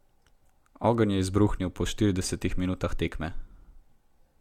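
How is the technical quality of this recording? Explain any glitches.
The recording has a persistent codec fault: generation loss runs through the whole clip. The speech has a swirly, smeared, hollow character, and consonant attacks are blurred. It likely comes from being encoded a few times in succession with AAC-LC, at a rate that fits about 96 kbit/s. Each pass quantises on a shifted frame grid, so the errors stack. On a spectrogram, content stops at 19 kHz, with grainy smearing between harmonics.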